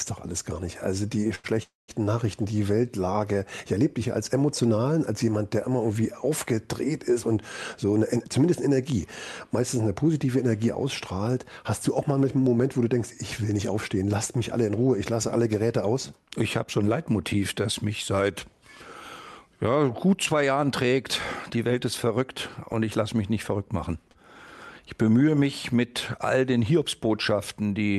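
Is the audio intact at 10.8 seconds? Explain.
Yes, at 10.8 seconds the audio is intact, with only the ordinary coding character of a call path whose top end stops around 12 kHz, which fits Opus at a moderate bitrate.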